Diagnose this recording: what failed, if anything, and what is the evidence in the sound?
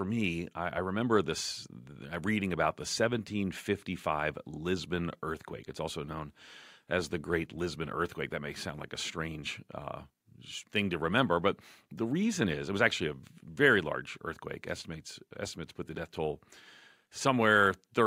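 Clock slip clicks run through the speech from 0.32 s to 17.9 s. Faint, evenly spaced ticks recur about every fifth of a second, around seventy in all. Each is a single-sample jump. The failure sits at the converter and clocking stage. Two devices likely run on free clocks that differ by around 100 ppm. Each time that drift adds up to a whole sample, one sample is dropped or repeated, leaving a tiny step.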